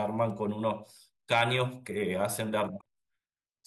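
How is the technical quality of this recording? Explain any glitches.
The recording has one glitch. From 2.77 to 2.85 s, damaged data in the compressed stream makes the decoder misread corrupted frames and lose sync until it finds a valid header, producing a short glitch. On a spectrogram it shows as a brief disruption, and on the waveform as an abrupt discontinuity.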